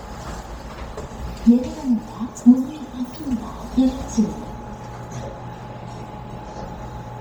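Bluetooth LC3 compression runs through the whole clip. The audio extends to about 20.3 kHz, but heavy codec damage shows as a breathy, grainy haze on the upper frequencies. There, at a low bitrate (this fits roughly 32 kbps), much of the detail has been discarded and replaced with synthetic noise. The smearing is consistent with 10 ms transform frames, and the likely cause is an LE Audio link.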